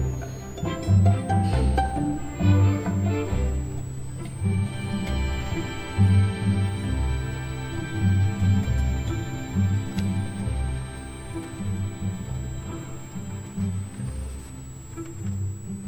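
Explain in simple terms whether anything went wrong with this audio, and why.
Switching supply whistle, throughout: a quiet high whine around 7 kHz, drifting between 6.6 and 8.5 kHz, from a switching power supply switching slowly enough to hear.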